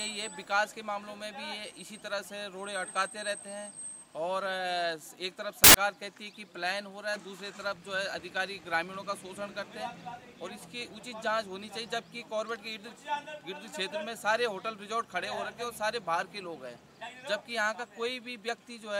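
Audio clip with one fault: samples built from the wrong bytes, 5.64 to 5.74 s. Misassembled bytes turn low bits into large values. This gives a burst of loud, harsh broadband noise.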